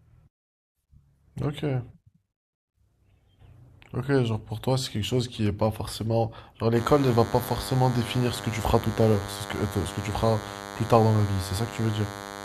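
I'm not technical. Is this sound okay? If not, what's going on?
No. From about 6.76 s to the end, there's DECT cordless phone buzz: a nearby cordless phone or base sends radio bursts 100 times a second, and the audio circuit picks them up. It's heard as a thin, steady buzz underneath the speech.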